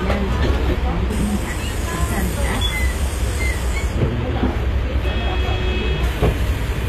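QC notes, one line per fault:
Throughout, HE-AAC compression: gritty, metallic treble with nothing above 14.9 kHz, likely from spectral band replication rebuilding the highs at a low bitrate, around 24 kbps.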